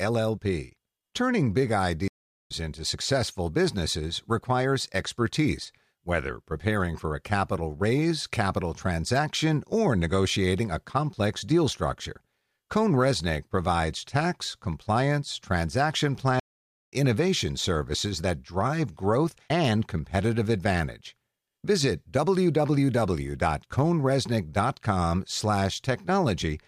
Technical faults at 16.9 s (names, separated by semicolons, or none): stream reconnect